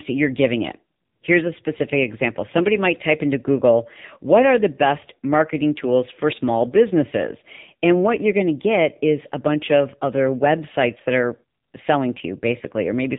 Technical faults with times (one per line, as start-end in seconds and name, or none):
0.00-13.19 AMR narrowband mobile codec